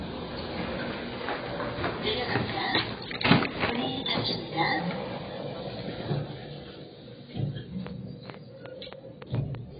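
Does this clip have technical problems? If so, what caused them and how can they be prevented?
Yes. The sound is dull and smeared throughout, with nothing above 4.9 kHz. The likely cause is heavy AAC compression at a very low bitrate, around 16 kbps. Encode at a higher bitrate to prevent it.

From 7.87 to 9.56 s, a train of clicks ticks over the sound. There are about seven uneven pulses, roughly four per second, peaking near 10 dB above the sound. They likely come from electrical interference or a faulty connection. Shielding cables and keeping connections secure would prevent this.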